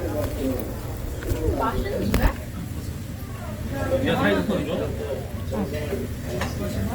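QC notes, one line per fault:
Throughout, Opus compression. Tones turn noisy, rough and grainy, and the damage is plainly audible. The likely cause is the codec's music mode refilling starved bands with folded or noise content. Bandwidth stays full to about 20.2 kHz, even at a low bitrate near 24 kbps.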